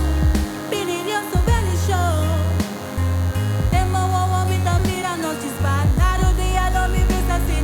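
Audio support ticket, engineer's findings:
DECT cordless phone buzz, present throughout. Thin, steady buzz at 100 Hz with dense harmonics, roughly 20 dB under the signal. Nearby DECT handset or base bursting every 10 ms; audio stage rectifying the RF. Relocate device or shield input.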